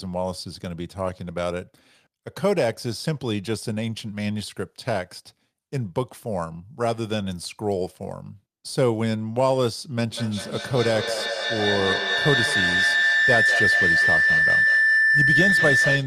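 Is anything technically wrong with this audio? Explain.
Yes. Feedback howl starts at 10.08 s and runs to the end of the clip. A loudspeaker's output re-enters a microphone on the same call and gains level on each pass, so the sound narrows to a tone around 2 kHz. It pulses roughly every fifth of a second and peaks about 4 dB above the speech.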